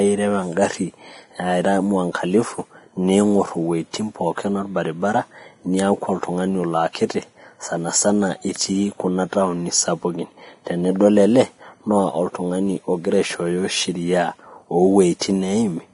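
Across the whole speech clip the sound is hissy and grainy, with the upper range dulled and nothing present above 10.6 kHz. Fine high detail dissolves into a rough wash of noise, and sustained tones take on a coarse texture. This is heavy Vorbis compression, likely at a low setting around 30 kbps: the codec trimmed the treble at that cut-off and quantised the remaining high detail so crudely that it turned into noise of similar loudness.

At 15.19 s a sharp onset arrives softened, with a short hiss leading into it and spreading about 20 ms ahead of the attack. This is pre-echo. The codec spread its quantisation noise evenly across a whole transform block, so noise sized for the loud attack near the end of that block also filled the quiet moment just before it, smearing the start of the sound backwards in time.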